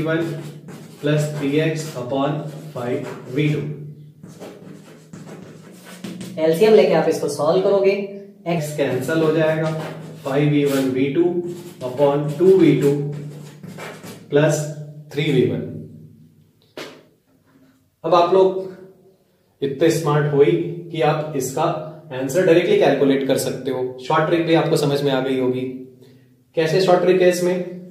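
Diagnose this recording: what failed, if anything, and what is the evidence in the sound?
A clock mismatch, likely in editing or playback, ran one section at the wrong speed. From 5.66 s to 8.58 s the audio plays at 1.14 times its recorded rate, so timing tightens and everything rises by about two semitones. Speed and pitch move together, which points to resampling against the wrong clock rather than pitch processing. Both return to normal abruptly at 8.58 s.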